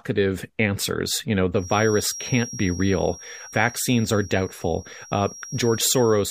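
A loudspeaker-microphone loop likely poised at feedback sustains a thin 5.6 kHz feedback whistle, roughly 15 dB under the speech, from 1.52 s, after "answers you know", onward.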